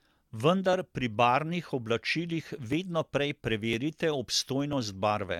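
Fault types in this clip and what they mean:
generation loss: smeared, swirly, hollow speech with blurred attacks and nothing above 17 kHz, likely from repeated AAC re-encoding, worse than a single pass leaves.
periodic USB or driver dropouts: brief skips of a few milliseconds, evenly spaced 1.0 s apart from 0.73 to 4.73 s, heard as regular ticks unlike random glitches.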